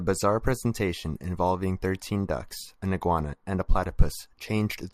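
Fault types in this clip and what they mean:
No faults can be heard anywhere in this recording.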